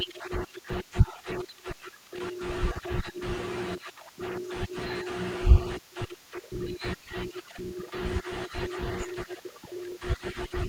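From 0.70 s to 9.92 s the speech has periodic USB or driver dropouts. Every 1.02 s, something briefly stalls the audio path. About 2 ms is lost and filled with silence. Around ten evenly spaced ticks result, heard only while sound is present.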